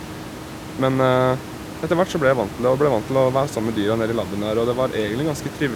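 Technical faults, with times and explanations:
Nothing stood out on listening, with the room's background noise sitting about 15 dB below the speech.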